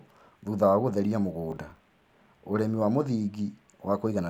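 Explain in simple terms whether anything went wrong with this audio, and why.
From 1.51 to 1.85 s the speech picks up a burst of gritty crackle. This is processor overload crackle: the computer fell behind, missing about ten short audio chunks of around 10 ms over that stretch, and each miss replayed stale audio with hard edges.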